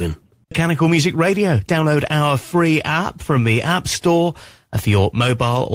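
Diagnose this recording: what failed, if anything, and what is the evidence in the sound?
At 0.51 to 0.53 s the speech lurches forward with no gap, and the two sides join almost directly. This is a skip ahead at the network and jitter buffer stage: about 0.7 s of audio already queued was discarded, likely on buffer overflow, cutting latency abruptly.

From 1.15 to 1.84 s, just before "our free app from", the speech sounds hurried at unchanged pitch, running at 109% speed. This is a jitter buffer speed-up: the receiver trimmed pitch-period slices, roughly 70 ms in total, to drain excess buffered delay.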